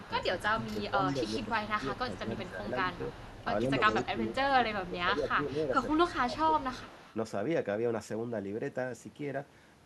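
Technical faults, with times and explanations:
0.04–3.44, 3.92–4.03, 5.88–6.12 and 6.58–7.16 s, echo leak: a faint copy of the speech trails 141 ms behind, about 25 dB down, likely from incomplete echo cancellation at a far-end loudspeaker.
0.42–2.65 and 3.63–6.81 s, speech suppressed in double talk: the talker dips in pieces, up to about 10 dB then 15 dB, likely the canceller ducking both overlapping voices.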